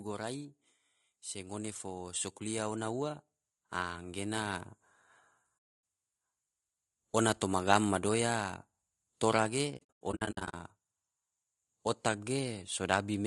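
Speech, rough and grainy throughout with noise between the harmonics and a thin, synthetic top band, likely low-delay AAC compression (AAC-ELD), at a rate that fits about 32 kbps rather than broadband noise. From 1.33 to 4.72 s, automatic gain rising lifts voice and background together by about 7 dB, a slow swell rather than a sudden level jump. AAC frame loss with muting leaves a soft-edged hole from 5.57 to 5.83 s (260 ms), then scattered dropouts from 9.77 to 10.54 s totalling 440 ms, the longest about a tenth of a second, faded rather than hard-cut gaps.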